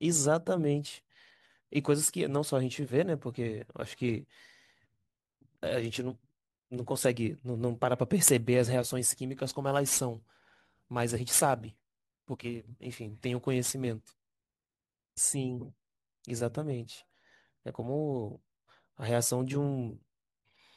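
From 9.29 s to 14.13 s the speech takes on a gritty, inharmonic fizz that rides on the louder and brighter syllables: crude rate conversion, where samples were simply dropped to the nearest neighbour with no filtering, which fits a step from 48 kHz down to 44.1 kHz. The uneven skipping leaves an error only roughly 15 dB below the signal. On a spectrogram, mirrored lines run against the harmonics and a grainy haze fills the upper band for that stretch.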